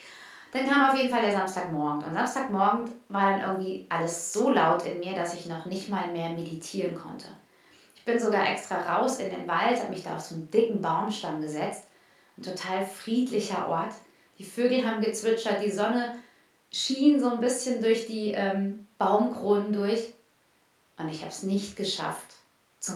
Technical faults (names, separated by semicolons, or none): none